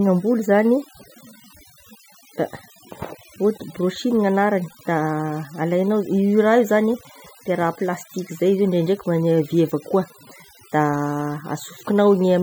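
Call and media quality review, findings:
Overdone noise removal, entire clip. Noise suppressor set too aggressive: bands near the noise estimate pulled down or gated, low-level speech detail removed alongside. Background collapses to near silence with twinkling specks.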